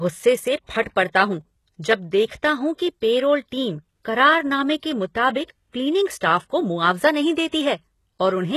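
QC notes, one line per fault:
throughout: HE-AAC compression. The treble of the speech sounds gritty and metallic, s sounds are lispy, and nothing remains above 12.3 kHz. This is likely heavy band-replication coding, where copied lower bands stand in for the real top end, pointing to a very low bitrate around 16 kbps.
0.82–0.86 s and 5.47–5.50 s: pre-echo. A brief hiss of about 35 ms comes just before "पड़ता हूँ", and one of about 27 ms follows "पैरोल टीम करारनामे के", softening the onsets. Coding noise meant for each loud attack spreads back into the quiet moment before it.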